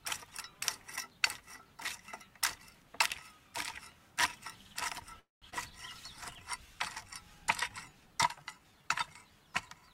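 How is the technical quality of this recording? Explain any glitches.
The recording of everyday sounds has three kinds of network glitches, all clustered between about 5.2 and 8.9 seconds.

From 5.19 to 5.45 s there is a call audio freeze. The last sound trails briefly, then about 180 ms of silence follows, likely because delayed packets emptied the jitter buffer. On a waveform it shows as a flat gap.

At 5.50 to 5.55 s the audio skips ahead. About 200 ms is dropped as the backlog clears, so the waveform joins almost directly, with a slight seam in the spectrogram.

A jitter buffer slow-down runs from 6.58 to 7.44 s at 94% speed, adding 58 ms. A second runs from 7.88 to 8.88 s at 89% speed, adding 118 ms. Repeated pitch periods draw sounds out at unchanged pitch, and the spectrogram shows stretched, smeared events.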